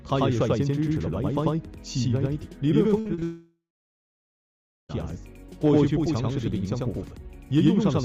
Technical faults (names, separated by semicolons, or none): channel delay (doubling); repeated packet loss (robotic sound); long network dropout